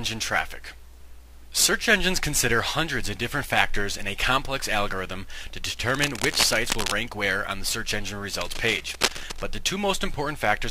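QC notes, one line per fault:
5.88–6.92 s and 8.39–9.42 s: cable scratch noise. Each burst lasts about a second, most likely from a worn cable, connector or control being moved so that its contact resistance jumps erratically. The changing contact chops dense, irregular bursts of noise into the signal, heard as a rough scratching or rustling laid over the sound, only a little quieter than the sound itself, before it clears.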